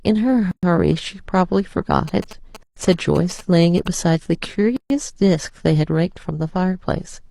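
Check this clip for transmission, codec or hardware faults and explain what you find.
Two separate problems show up in this speech clip: repeated dropouts where encoded pieces were joined, and a stretch of GSM interference from a nearby phone.

Gaps at joins of encoded pieces: the speech drops to silence from 0.51 to 0.63 s, 2.63 to 2.77 s, and 4.77 to 4.90 s, roughly every 2 s. Each gap runs about 116 to 136 ms. Each 2-second piece was probably encoded on its own and butted against the next without trimming, so the encoder's start-up delay and last-frame padding stay in as dead air. You hear a sharp hole with slightly smeared edges, then the speech picks up where it left off.

GSM signalling bursts: from 2.08 to 3.88 s there's a galloping dit-dit-dit of short buzzes at 217 Hz, sitting roughly 15 dB under the speech. That's a 2G handset nearby sending short groups of radio bursts while signalling, the kind of thing that happens before a call or text comes in. 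The audio circuitry rectifies the RF and turns the burst pattern into audible buzz. The buzzing also overlaps the 2.63 s gap.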